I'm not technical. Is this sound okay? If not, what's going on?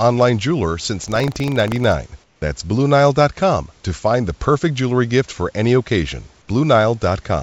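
No, there are two glitches. From 1.00 to 1.94 s there's buffer tearing: the software filling the audio buffer and the sound card reading it got out of step, so each chunk carries a tiny scrap of sound from about 70 ms earlier. That gives a robotic buzz repeating about 25 times a second.

Then from 2.24 to 2.42 s, a pause of about 180 ms, the real room background drops out and is replaced by a smooth, featureless hiss that's slightly quieter. That's likely comfort noise in place of the background, where the call system stops sending during silence and the receiving end fills the gap with made-up noise. The call line itself cuts everything above about 7 kHz, which is normal for it.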